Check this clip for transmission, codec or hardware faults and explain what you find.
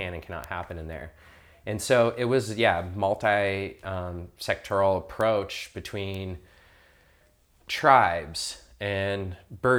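There are bit error spikes in this speech clip, three of them, at 0.44 s, 5.21 s and 6.14 s. Each is a single sharp tick. A flipped bit in memory or on a digital link makes the sample value jump by a power of two and snap straight back. The jump lasts a sample or two, so the tick is broadband and unrelated to the speech. The first peaks at about -13 dBFS. The later two peak at about -19 dBFS.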